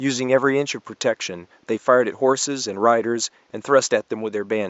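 No technical faults can be heard anywhere in the speech, and the faint room noise beneath it sits about 43 dB below the voice as part of the original recording.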